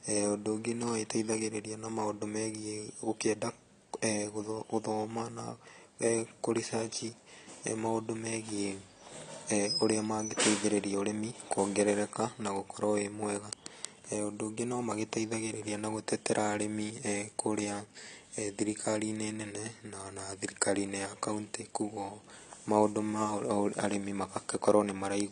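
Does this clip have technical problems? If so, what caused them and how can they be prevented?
Yes. Throughout, the speech sounds dull and smeared with a fizzy edge, and nothing above 10 kHz. This points to AAC compression, likely at about 32 kbps, which truncated the highs and coarsely quantised the spectrum. Encoding at a higher bitrate, or keeping an uncompressed master, would prevent it.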